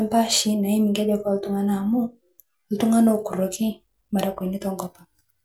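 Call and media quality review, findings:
Crude rate conversion, 0.33–2.82 s: resampler likely stepping between rates by linear interpolation without an anti-alias filter, consistent with a 44.1 kHz to 48 kHz conversion. Gritty inharmonic fizz riding on louder, brighter speech, around 30 dB below it.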